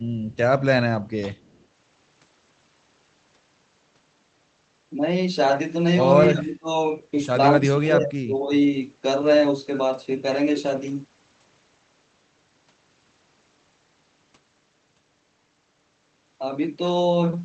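From 1.36 to 1.66 s there's a short echo leak: a very faint, delayed copy of the speech trailing the original by about 235 ms, sitting far below the main signal at roughly 40 dB down. That's likely the far end playing the call over a loudspeaker, with its echo canceller letting a scrap of the mic pickup slip back through. It's easy to miss; listen for a ghostly smear just behind the speech.

Then come two spots of speech suppressed in double talk, from 6.3 to 6.69 s and again from 7.59 to 8.51 s. The speech dips hard, by around 20 dB at its deepest. The likely cause is both sides talking at once: the echo canceller couldn't tell the local talker from loudspeaker echo, so it turned everything down. The second dip runs longer.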